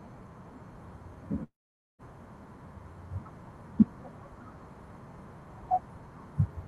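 At 1.43 s the speech cuts out and doesn't come back until 2.02 s, a gap of roughly 0.58 s. The receiver stretches the last bit of sound into a buzzy tail that fades, and most of the gap, about 0.47 s, is near-silence. When speech resumes, about 0.56 s of it is simply gone. That's most likely a long network dropout on the call path, whose top end stops around 12 kHz, which fits Opus at a modest bitrate.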